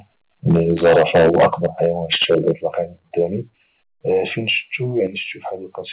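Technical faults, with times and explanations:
0.50–1.86 s and 2.12–2.51 s, microphone overload: The loudest syllables carry a harsh, crackling edge with flattened tops. The likely cause is an input gain set too high, so the peaks drove the converter past its ceiling and were cut off. The first run overshoots by about 12 dB, with roughly a tenth of samples clipped. The second is milder, at about 7 dB over and around one in twenty samples clipped.
0.52, 1.53, 2.55, 3.57 and 5.07 s, microphone volume stepped down: The overall level drops abruptly in single steps of about 2, 7, 6, 3 and 7 dB. The likely cause is the call software reacting to an overloaded input by lowering the device's input gain. The first three steps come during or just after the distorted passages. The cumulative reduction leaves the later part of the clip far quieter, and the band-limited telephone sound stays the same throughout.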